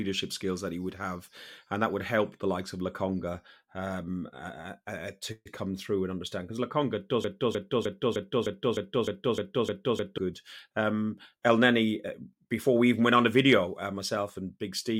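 From 7.24 s to 10.18 s the speech turns into a broken-record loop: a 0.31 s fragment repeats back to back, exactly, ten times. The playback or encoding chain likely stalled and kept resending its last buffered piece, so the intended audio for that span is lost.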